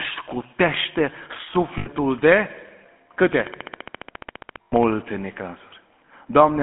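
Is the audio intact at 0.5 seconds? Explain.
No, at 0.5 s you're hearing GSM full-rate codec damage, and it runs through the whole clip. The speech is squeezed into a phone band of roughly 200 Hz to 3.4 kHz, and the pulse-driven excitation modelling gives that obvious buzzy, gravelly roughness, which fits a 13 kbps full-rate stream.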